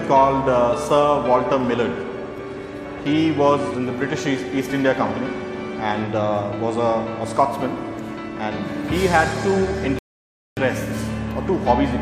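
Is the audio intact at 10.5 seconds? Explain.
No. A rebuffering stall runs from 9.99 to 10.57 s, so 10.5 s falls inside it. The player drained its store of downloaded audio and had to halt until more data arrived, adding about 0.58 s of dead air. The sound drops abruptly to silence at 9.99 s, then picks up at 10.57 s exactly where it broke off. Nothing is skipped or repeated, but the moment at 10.5 s is pure silence.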